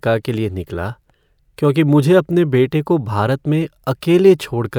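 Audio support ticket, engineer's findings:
No technical faults found on listening; the speech signal stays stable and continuous throughout, with nothing in playback to trace to a capture, processing or transport component.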